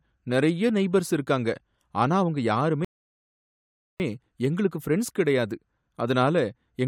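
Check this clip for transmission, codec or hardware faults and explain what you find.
There is one transmission fault, a rebuffering stall. From 2.85 s to 4.00 s, right after "நெய்பர்ஸ் இருக்காங்க ஆனா அவங்க", the player drained its buffer and waited for more data. The speech drops to silence and resumes exactly at "எங்களுக்கு ஃப்ரென்ட்ஸ் கிடையாது", adding 1.15 s with nothing lost. The waveform shows a flat gap, and the spectrogram shows a blank vertical band.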